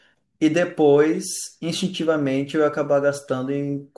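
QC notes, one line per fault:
No technical faults detected.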